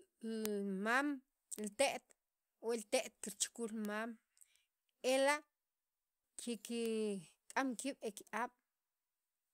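Bit error spikes at 0.46, 1.59, 3.85 and 6.86 s: each is a single corrupted sample in which one flipped bit in memory or on a digital link throws the value up or down by a power of two before the next sample returns to normal. Because the jump lasts only one sample, it has no pitch or shape tied to the speech around it, and each lands as an isolated sharp tick spread across the whole spectrum.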